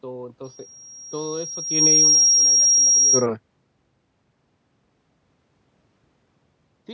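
From 0.44 to 3.26 s, the microphone re-captures its loudspeaker and the loop runs away at 5.6 kHz: a loudspeaker feedback squeal swelling over two seconds to about 5 dB above speech.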